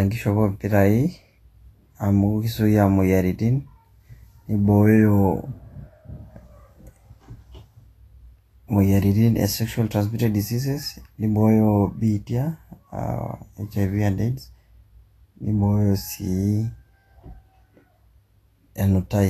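Throughout the speech, plainly audible Vorbis compression, likely at a low setting pointing to roughly 34 kbps, leaves the treble hissy and grainy with smeared consonant attacks. On a spectrogram, energy stops flat at 14.2 kHz, and the upper bands look speckled and noisy.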